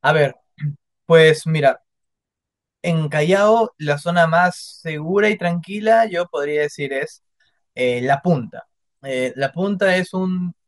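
A speech recording in which no technical fault can be heard at any point, so there is nothing to place in time or trace to a cause.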